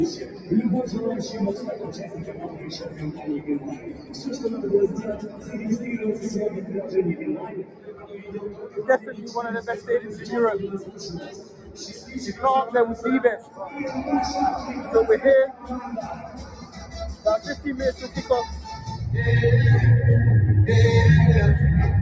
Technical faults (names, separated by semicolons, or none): noise suppressor applied to music or sounds; sound cut by the noise suppressor